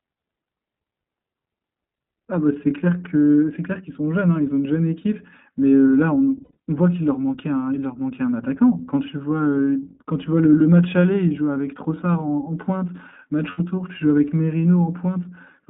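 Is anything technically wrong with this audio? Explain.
Yes, two problems. The whole clip has been through the iLBC codec. The speech is squeezed into a phone band of roughly 150 Hz to 3.6 kHz, with clearly audible rough, slightly synthetic grain from the codec modelling each short frame on its own. That fits the 20 ms, 15.2 kbps mode.

There are also lost iLBC frames, at 6.44 to 6.57 s and at 13.50 to 13.60 s. The decoder fills each gap by repeating the last pitch cycle with some noise, so you get a brief buzzy, held vowel. The first loss covers about 120 ms in bursts, the longest run under a tenth of a second. The second is 80 ms, and the voice snaps back right after each one.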